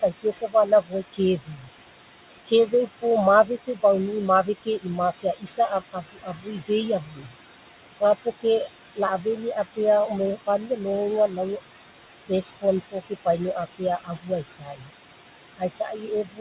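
A noise suppressor is working on the whole recording, pulling down whatever it judges to be steady background by about 17 dB, frame by frame. The room noise, which sits about 14 dB under the speech, therefore drops away between phrases and swells back in beneath them. All of this sits inside the narrow band of the G.711 call path, with nothing above 4 kHz.

The same suppressor also mistakes parts of the speech for noise and turns them down with the background. This happens from 0.02 to 1.69 s, 2.46 to 3.83 s, 4.45 to 7.3 s, 8.0 to 9.78 s, 10.44 to 11.39 s, 12.17 to 14.88 s, and from 15.57 s to the end. The dips reach about 13 to 18 dB. The heaviest stretch is 4.45 to 7.3 s, where roughly a second of speech is affected. There, soft consonants and word endings sound swallowed or faint.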